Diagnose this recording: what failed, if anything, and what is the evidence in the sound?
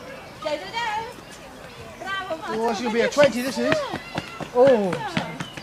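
Buffer stage: a regular click every 1.41 s from 1.28 s to 5.50 s, likely clock drift buffer slips from unsynchronised clocks roughly 700 ppm apart.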